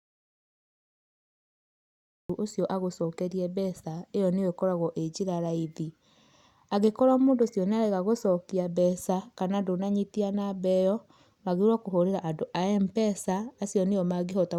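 From the very start until 2.30 s the recording is dead silent, an audio dropout to silence already under way when the clip begins. There is no room tone at all, likely from an input that was disconnected or muted while recording continued. Speech then enters abruptly, mid-flow.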